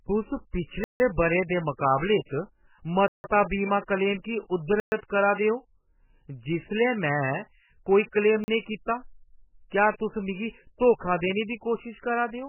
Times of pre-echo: 9.98-10.00

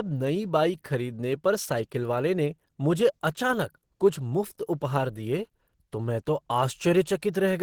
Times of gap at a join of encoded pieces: none

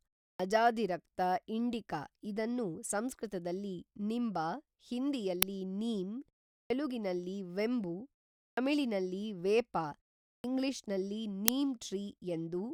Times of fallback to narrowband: none

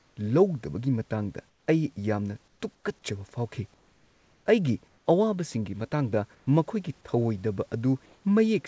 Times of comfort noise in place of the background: 0.00-0.17, 1.49-1.67, 2.48-2.84, 3.74-4.46, 4.88-5.06, 6.35-6.47, 8.06-8.24

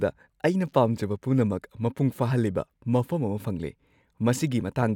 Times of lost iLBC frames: none

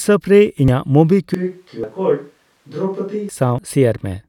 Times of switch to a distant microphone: 1.34-3.29

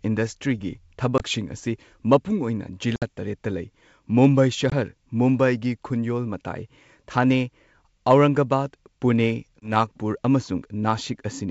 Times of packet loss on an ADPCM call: 1.18-1.23, 2.96-3.04, 4.70-4.73, 9.60-9.72

